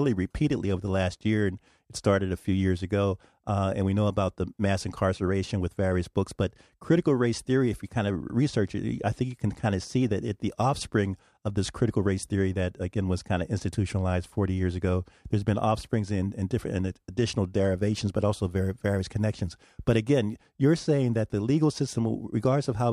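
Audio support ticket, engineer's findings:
No audible fault found in the speech recording; nothing to attribute to any component in the playback or capture chain.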